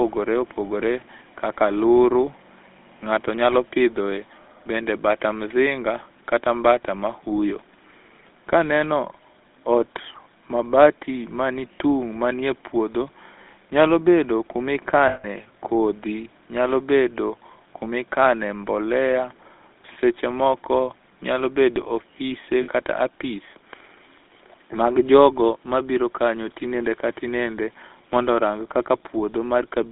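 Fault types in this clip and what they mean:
GSM full-rate codec: The speech runs through the original GSM mobile codec, which rebuilds it from a vocal-tract model driven by sparse pulses. The result is a plainly audible buzzy, gravelly roughness. The band sits between 250 Hz and 3.6 kHz, which fits a 13 kbps full-rate line.
Lost GSM frames: Twice, missing frames are covered by repeating the last good one. This gives a brief rough, metallic ringing hold. The first, at 15.08 to 15.26 s, lasts 160 ms. The second, at 22.62 to 22.69 s, lasts 60 ms.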